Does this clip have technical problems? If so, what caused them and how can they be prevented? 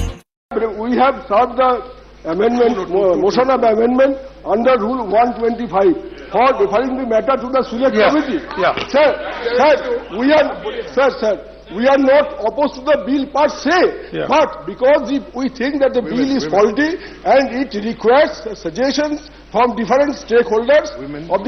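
No, nothing stood out as a technical problem on listening, so there is nothing here that needs preventing.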